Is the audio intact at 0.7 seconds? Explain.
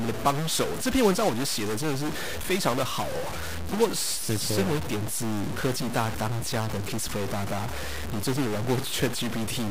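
No. At 0.7 seconds, as throughout the recording, the speech carries a stuck bit fault. One data bit is likely held at a fixed value by a broken line or converter, so about half the samples are off by a step of roughly -30 dBFS, in a pattern that follows the waveform. This gives a harsh, buzzy distortion, and the quiet gaps between phrases fill with steady noise instead of silence.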